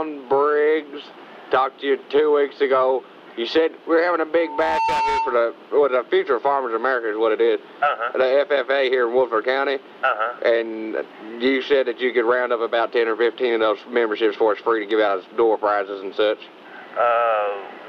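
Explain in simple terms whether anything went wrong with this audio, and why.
From 4.38 to 5.56 s, a loudspeaker feedback squeal: the microphone picked up its own loudspeaker, and a 900 Hz tone fed on itself. It swells over under half a second until it is as loud as the sound itself. A steady electrical whine would start at full strength instead.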